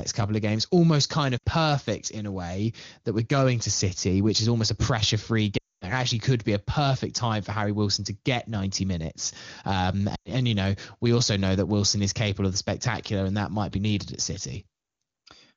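Speech, with a brief drop to near silence at 1.38–1.44 s before "perfect in a way", a drop to near silence at 5.57–5.92 s after "almost a pressure free", and a drop to near silence at 10.15–10.31 s before "and you know we". These are lost AMR speech frames, concealed by repeating the last good settings at falling gain.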